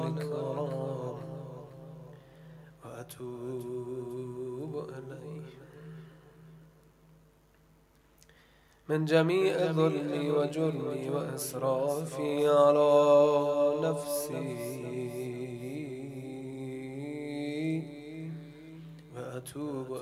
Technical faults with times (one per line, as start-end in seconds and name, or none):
none